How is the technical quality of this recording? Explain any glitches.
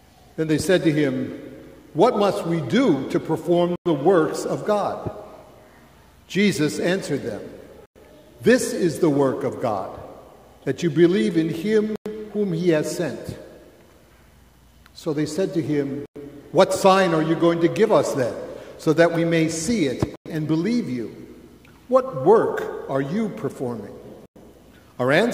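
The recording has one recurring fault: a gap between chunks. Silent holes of 100 ms appear at 3.76, 7.86, 11.96, 16.06, 20.16 and 24.26 s. Each gap falls 4.1 s after the one before. The audio was handled in 4-second chunks, and silence was left at each join. No sound is lost. It is only pushed later. The sound is interrupted by a short hole at each join, at regular intervals.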